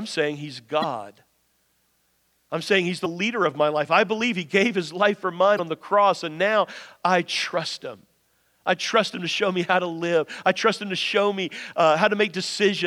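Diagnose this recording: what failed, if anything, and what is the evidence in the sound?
What failed is the codec stage: damaged data in a compressed stream. Three short glitches land at 0.80–0.84 s, 3.02–3.06 s just before "leader of my life", and 5.55–5.60 s between "life for" and "on the cross and". Corrupt frames there make the decoder misread and lose sync until it finds the next header.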